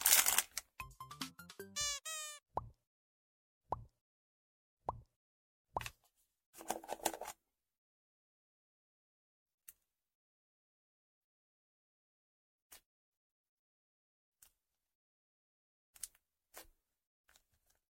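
At 1.27 to 1.31 s and again at 6.81 to 6.85 s, damaged data in a compressed stream produces a short glitch of about 40 ms each time. Corrupted bytes leave the decoder unable to read those frames correctly, so it misreads or drops them and then resynchronises on the next valid frame header. On a spectrogram each event is a brief vertical disturbance that breaks the surrounding pattern, and the waveform shows an abrupt, irregular discontinuity.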